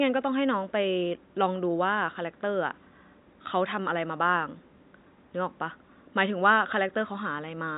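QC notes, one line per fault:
No faults are heard in this speech clip. A faint room noise sits in the background, about 50 dB below the speech.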